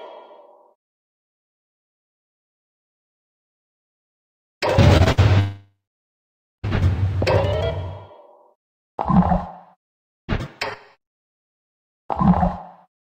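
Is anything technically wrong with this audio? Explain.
Yes. A cluster of network losses disrupts the audio around the five-second mark.

At 4.97 s and 5.04 s there is short concealed packet loss: about 20 ms of audio failed to arrive each time, and the receiver extended the preceding sound to cover it, leaving brief smears or wobbles.

At 5.12 s a burst of packet loss removed about 60 ms. Concealment stretched the last sound into a short fading buzz or hiss before the audio resumed further on.

From 5.39 to 6.65 s the sound continues briefly, fades, and then goes silent for about 0.9 s before returning with about 1.24 s missing. This is likely a long network dropout, where no audio reached the receiver.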